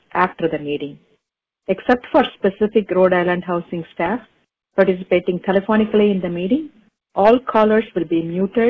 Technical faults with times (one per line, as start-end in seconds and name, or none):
none